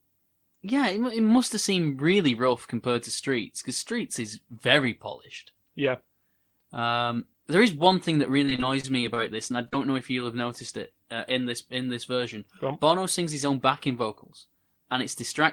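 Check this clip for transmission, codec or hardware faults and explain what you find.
One transmission fault appears. From 8.45 to 9.74 s, after "is one thing that" and before "know if you'll have", there is repeated packet loss with a robotic sound. Short gaps of up to 37 ms were each patched by stretching the preceding sound, which leaves a choppy, robotic stretch with pieces missing.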